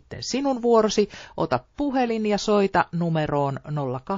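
From the very start there's sample clock jitter running through the whole clip. The converter's clock wanders by something like a microsecond or two, so each sample lands a touch early or late, and the error scales with how steeply the waveform is moving. You hear it as a faint grainy hiss, roughly 40 dB below the speech, riding on the louder and brighter syllables and disappearing in the gaps.

Also present throughout is a watery, swirly coarseness, with s sounds going chirpy and metallic. That points to MP3 compression, likely at a low bitrate around 32 kbps. At that rate the encoder runs short of bits, so it lets the quieter spectral detail flicker in and out from frame to frame. The damage is plainly audible.

At 1.75 s, just before "puhelin ja soita", there's a pre-echo. The codec spreads its quantisation noise evenly across a roughly 72 ms block, and because it never switched to short blocks for the sharp onset, noise sized for the loud attack leaks into the quiet moment ahead of it. 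You get a brief hiss about 32 ms long, rising about 11 dB, right before the attack, which itself comes across soft and smeared.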